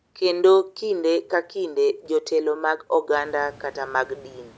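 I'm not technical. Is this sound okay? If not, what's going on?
Yes, nothing stood out as a problem when listening to this speech.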